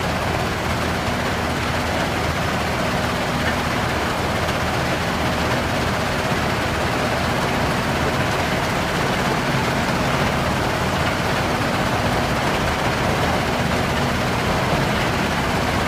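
At 4.04 s and again at 7.66 s the audio jumps forward slightly, with compressed frames skipped. Each time, about one frame of the coded stream never reaches the output, either missing from the file or discarded by the decoder as damaged. The jump size fits a frame length of about 23.2 ms. Overlap between neighbouring frames softens each join, so it comes through as a short smeared blip rather than a sharp click.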